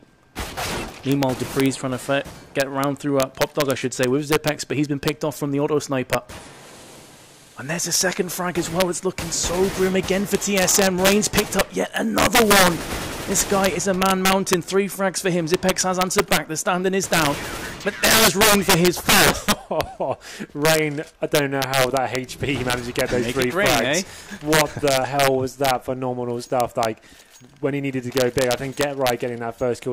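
Throughout the clip, a sum or gain stage pushes the signal about 8 dB past the integer ceiling, and instead of being held at the limit, those values wrap around to the opposite sign. Under one percent of samples cross the line, but each one leaps across the full range. On every loud peak this produces sharp, violent cracks, far harsher than ordinary clipping, the classic signature of integer overflow, while quieter stretches pass through untouched.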